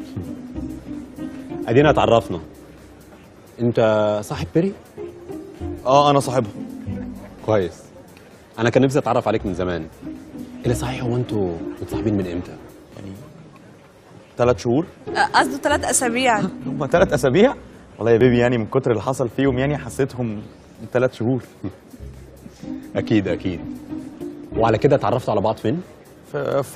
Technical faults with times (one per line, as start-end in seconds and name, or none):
12.22 overlap between stream segments
18.21 overlap between stream segments
24.21 overlap between stream segments